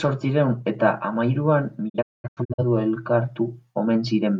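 A speech clip with a digital broadcast dropout from 1.88 to 2.64 s, right after "zortziehun eta hamahiruan": the receiver lost its signal or rejected corrupted frames and muted until clean ones returned. About 430 ms of sound is missing, broken into several holes scattered over 680 ms, the longest 210 ms. Each mute fades in 20 ms, so on a waveform or spectrogram the signal drops to flat, empty gaps with short tapered edges.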